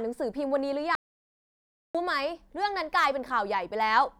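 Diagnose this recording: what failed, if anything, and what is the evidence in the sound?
The input to the recorder was likely lost for about a second, through a disconnected device, failed link or stray mute, while writing continued. The result is an audio dropout to silence: the speech cuts out at 0.95 s and resumes at 1.95 s, with no room tone between.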